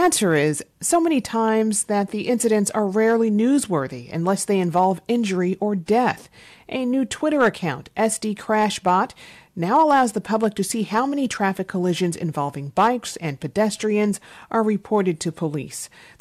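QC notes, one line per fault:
Throughout, hard clipping: the speech arrives about 4 dB hotter than a stage in the chain can pass, so the loudest peaks, a small fraction of well under one percent of samples, are sliced flat, adding high harmonics heard as brief crackle on louder syllables.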